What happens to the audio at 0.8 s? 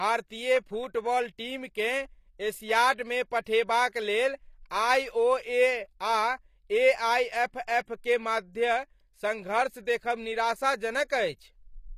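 At 0.8 s the speech has gritty, metallic treble and lispy s sounds, as it does throughout; this is likely HE-AAC compression, with upper bands rebuilt from copied lower ones at a rate that fits roughly 24 kbps.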